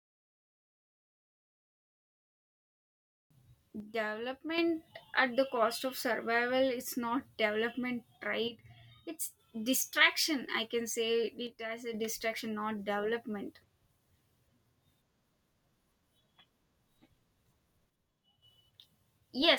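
The speech level drops abruptly by about 6 dB at 3.80–4.58 s, 8.48–9.39 s (after "not development"), 11.47–11.94 s and 17.90–18.42 s, then recovers. The likely cause is one channel dropping out, leaving the mono sum with half the shared signal.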